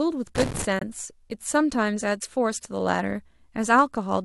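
A speech clip with two faults. From 0.35 to 0.65 s there is loose connector crackle, an irregular scratchy burst from a contact making and breaking, ragged rather than evenly spaced like digital clicks. At 0.79 to 0.83 s a corrupt frame was muted: the decoder rejected damaged data and left a sudden 42 ms silence, about one frame long, with timing preserved rather than skipped.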